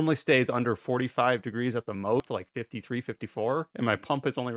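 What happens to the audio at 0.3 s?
Nothing goes wrong at 0.3 s: the audio there plays through cleanly, with only the narrow 4 kHz bandwidth of the G.711 call path, and no dropout, glitch or distortion.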